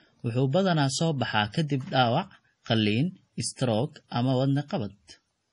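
A speech recording with heavy MP3 compression throughout: nothing above 10.5 kHz, plus watery, swirly smearing on sibilants, likely from a low bitrate around 32 kbps.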